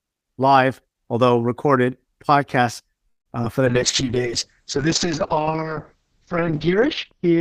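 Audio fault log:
3.09–3.28 s: call audio freeze. The sound is stretched as a fading buzz for about 0.16 s, with about 0.12 s of that near silence, then resumes where it stopped. Nothing is lost, but playback now runs about 0.16 s later, likely from packets held up until the jitter buffer emptied.
3.42–3.45 s: short concealed packet loss. About 20 ms of audio never reached the decoder, and the receiver filled the hole by extending the preceding sound before blending back. The result is a brief smear or wobble, and any short consonant there can disappear.
3.67–7.41 s: call bitrate drop. The encoder rate falls from 32 kbps to 6 kbps, staying at the minimum for about 2.8 s. Coarser coding makes the speech rough and watery, and audio bandwidth shrinks from 20 kHz to 6 kHz, so it turns audibly muffled.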